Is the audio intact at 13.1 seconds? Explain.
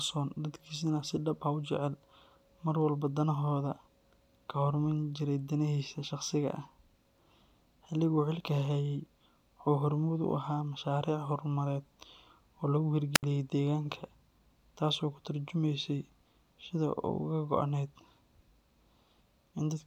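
No. A wireless microphone squelch dropout runs from 13.14 to 13.23 s: the analogue FM radio link fades, hiss swells briefly, then the receiver's squelch cuts the output to near silence for 69 ms before the voice returns.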